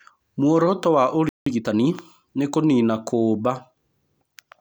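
At 1.29 s the speech cuts to silence for about 174 ms, a playback stall, most likely the player running dry of data or having its thread blocked. From 1.46 to 1.80 s the speech rushes at 1.5 times normal speed with unchanged pitch: time-compressed catch-up, where short slices are cut and cross-faded to clear the backlog.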